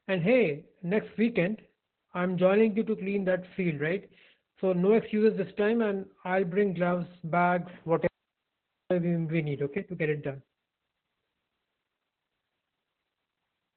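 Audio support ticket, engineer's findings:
Opus voice compression, whole clip. Speech muffled, hoarse, faintly robotic throughout. Nothing above about 4.4 kHz. Narrowband SILK coding, linear-prediction model with coarsely quantised excitation. Heavy damage fits a very low bitrate, around 8 kbps. Encoder dropped the upper band to save bits. Check the encoder bitrate and bandwidth settings upstream.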